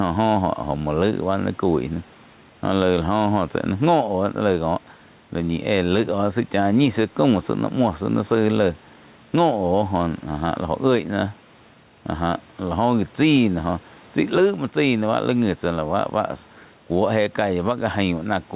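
Throughout, gain pumping: likely excessive input gain with a fast limiter clamping each loud syllable, so the gain swings around 5 dB.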